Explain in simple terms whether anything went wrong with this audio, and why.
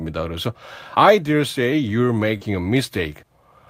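At about 2.37 to 2.43 s there is a short concealed packet loss. Roughly 40 ms of the call arrived too late, so the receiver stretched the preceding sound to fill the gap, which leaves a brief smear before normal speech returns.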